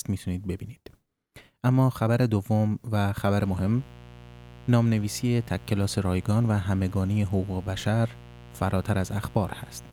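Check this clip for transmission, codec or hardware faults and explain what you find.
One hardware fault is present: mains buzz, from 3.36 s through to the end of the clip. Something in the signal chain, such as a dimmer, a rectifier or a poorly shielded cable, is letting sharp switching spikes from a 60 Hz mains supply leak into the audio, two per cycle. Those spikes carry a dense series of 60 Hz harmonics climbing into the kilohertz range, so the speech sits over a steady, raspy buzz, roughly 20 dB below it.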